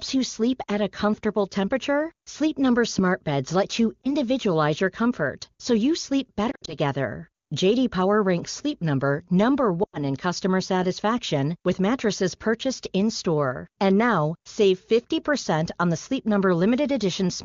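Lost AMR speech frames: radio errors corrupted frames, so the wideband decoder, running cleanly at 23.85 kbit/s, reused its last good pitch and vocal tract settings at falling gain. This causes a brief dip at 4.02 s, scattered warbling from 6.51 to 6.74 s, and a drop to near silence from 9.83 to 9.99 s.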